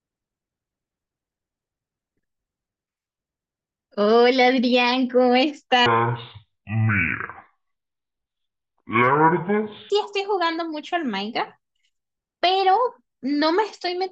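From 5.86 to 9.90 s, a section at the wrong speed drops to half speed, so the speech turns slow and deep, sitting roughly ten semitones lower before snapping back. Speed and pitch move together here, the likely cause being playback or editing against the wrong clock. On a spectrogram, harmonics and formants squeeze toward lower frequencies and stretch out in time, and the waveform's cycles and syllable envelopes look visibly drawn out.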